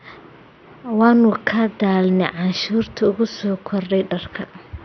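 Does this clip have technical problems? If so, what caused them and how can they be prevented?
Yes. Throughout the speech the sound is dull and muffled, with nothing above about 6.2 kHz, and a gurgling, granular roughness clings to every syllable as upper bands flicker in and out. The likely cause is heavy MP2 compression: the Layer II encoder splits the signal into 32 sub-bands, and with a starved bit budget, which fits a rate around 48 kbps, it drops the top bands entirely and coarsely quantises the rest. To prevent it, encode at a higher bitrate or use a more efficient codec.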